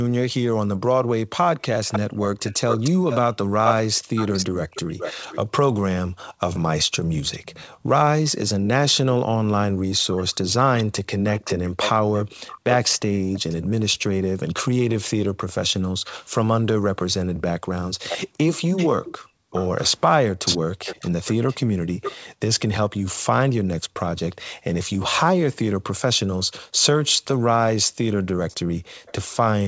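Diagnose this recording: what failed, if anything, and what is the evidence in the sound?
Echo leak, at the call-processing stage: a delayed copy of the speech trails the original from 1.62 to 14.54 s at 440 ms, fairly loud, and from 18.09 to 23.52 s and 28.48 to 29.12 s at 585 ms, weaker and then faint. The likely cause is a loudspeaker on one side whose echo canceller passed residual sound back. A spectrogram shows ghost copies of syllables shifted right.

Background gated by the echo canceller, also in call processing: the room tone dips by about 40 dB between 6.09 and 7.86 s (about half a second in total), at 12.35–12.64 s, and from 15.98 to 29.06 s (about 1.5 s in all). The canceller clamps the microphone while it suppresses echo. On a waveform the noise floor shows short near-silent gaps.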